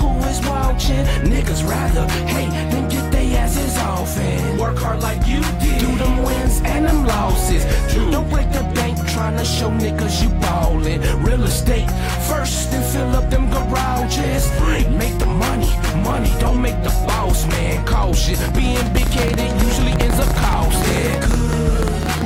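From 18.97 s to 22.22 s, a train of clicks runs over the sound. About thirty similar pulses arrive at roughly 8.6 per second, unevenly spaced, around 10 dB above the audio. It ticks and pops. The likely cause is interference, a faulty connection or a power supply fault.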